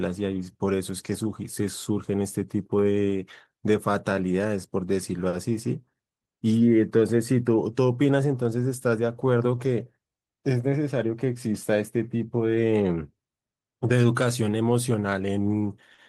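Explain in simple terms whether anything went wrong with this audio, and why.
Something did go wrong, in three related ways.

The underlying problem is clock drift between sender and receiver. The sending device's clock ran slow, by roughly three percent. So the sound arrived a little too slowly for the listening side. The receiver's buffer kept draining, and it had to keep patching the gap. That mismatch lasts through the whole clip. It explains the small timing wobbles you hear.

The patching shows up as repeated timing corrections, from about 0.09 to 15.44 seconds. The receiver kept stretching tiny pieces of the speech to keep pace. Overall, the speech plays at about 98 percent speed. Altogether nearly half a second of extra time gets added. Each stretch is small. You hear a slightly uneven, dragging rhythm rather than clear glitches.

There are also two short stalls from a late packet. 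One is at 5.29 to 5.36 seconds, and the other is at 15.94 to 16.01 seconds. Each time, a chunk of audio arrived late. The receiver held the last sound for 40 milliseconds while it waited. Then it carried on from the same point. Nothing is lost, but that sound lingers a moment too long.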